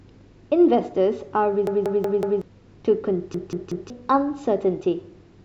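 Speech with two repeated-buffer stutters, at 1.67–2.42 s and 3.34–3.90 s. Late audio made a 186 ms chunk replay with hard joins, which shows as identical blocks tiled across the waveform.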